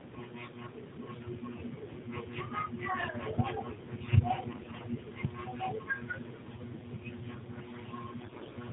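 The speech passed through the AMR narrowband mobile codec at a low rate, likely around 7.4 kbps. With nothing above 4 kHz, it sounds muffled, buzzy and synthetic. From 4.48 to 4.85 s, and again from 8.20 to 8.53 s, AMR bit errors corrupt around a tenth of the weakly protected bits, so the voice keeps its pitch and level but turns hoarse, scratchy and gargly.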